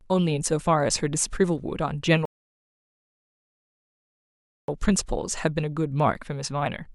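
At 2.25 s the speech just drops into silence and sits there until 4.68 s, then picks up exactly where it left off. That's a rebuffering stall: the player burned through everything it had downloaded and had to wait for more data before it could carry on. Nothing goes missing, so there's no jump or clipped syllable on the restart, but the gap tacks about 2.4 s onto the playback.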